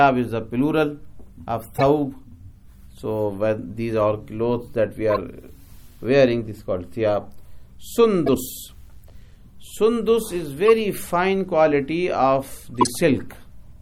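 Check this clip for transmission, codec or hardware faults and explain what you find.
Six runs of damaged codec frames were decoded and played as if intact. The corrupt frame decoded fault lands at 1.74–1.83 s, 2.97 s, 5.10–5.18 s, 8.26–8.36 s, 10.66 s and 12.75–12.88 s. Flipped bits send energy to wrong frequencies for a few frames each, giving short chirps and noise bursts, faint at 2.97 s, loudest near 12.8 s.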